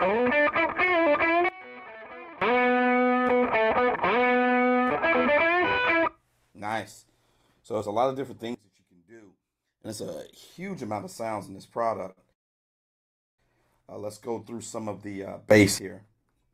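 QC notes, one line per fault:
1.49–2.42 s and 8.55–9.85 s, sudden gain jump: level likely dropped abruptly by about 22 dB, then about 20 dB, without a ramp, so sound and background noise fall together at once.
12.11 s to 12.19 s, short stall from a late packet: a packet arrived late and the buffer emptied, so the last sound is held about 53 ms too long with a faint buzz or dip.
12.33–13.40 s, call audio freeze: a long delivery hold-up likely emptied the buffer; the held sound fades out and about 1.05 s of silence is inserted before the audio resumes where it stopped.
15.51–15.79 s, sudden gain jump: the gain likely leapt up by about 20 dB in one step, so sound and noise together become abruptly louder.
16.14–16.50 s, jitter buffer speed-up: excess buffered audio was trimmed by cutting short pitch-period pieces, about 40 ms in all, so playback runs at 108% speed with unchanged pitch and sounds hurried.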